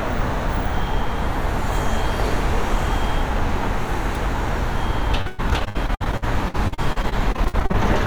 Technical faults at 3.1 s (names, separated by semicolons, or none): none